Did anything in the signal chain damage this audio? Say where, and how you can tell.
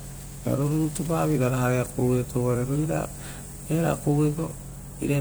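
Yes. The damage is at the converter, from sample clock jitter across the first 1.5 s of this speech. A roughness rides on the signal, strongest on loud, bright passages, and drops away in the gaps between them. An unsteady clock, wandering by a few microseconds, makes each sample slightly early or late. The error grows with waveform slope, landing around 20 dB below the signal. Steady background hiss or dither would persist through silence. This noise tracks level and treble.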